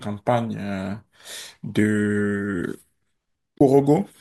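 AAC frame loss with muting cuts out this speech recording from 3.58 to 3.61 s, a gap of about 30 ms. That length fits three short codec frames going missing. The decoder filled them with silence rather than guessing their content, and the overlapping transform windows fade the sound down into the gap and back up out of it. The result is a brief soft-edged hole. Around it, the light coding damage likely comes from low-delay AAC coding at a moderate bitrate.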